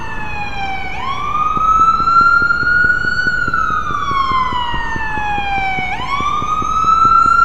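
From 1.57 s to 7.27 s a train of clicks runs under the sound: a steady ticking at 4.75 clicks per second with regular spacing, about thirty pulses in all. Each click has much the same sharp shape and peaks roughly 5 dB above the surrounding sound, so the ticks stay clearly audible over the material rather than masked by it. The even repetition and closely matched pulses point to an external source, likely electrical interference from nearby equipment or a faulty connection or power supply.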